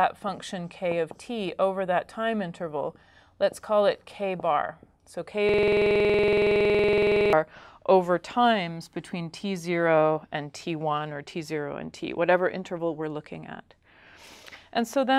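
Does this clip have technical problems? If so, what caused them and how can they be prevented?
Yes. A system hang loop runs from 5.49 to 7.33 s. The system stalled while the audio hardware kept replaying one 46 ms slice of its ring buffer about 40 times at 21.5 Hz, producing a rough buzzing stutter. That length fits a 2048-sample buffer. To prevent it, run audio at high priority and use a driver that mutes output when the buffer stops being refilled.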